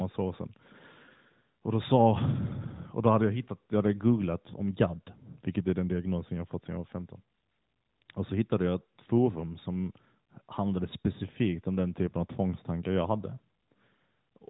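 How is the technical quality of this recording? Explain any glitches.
Nothing in this speech recording comes across as a glitch, so there's really nothing to explain beyond the ordinary character of a mobile phone call.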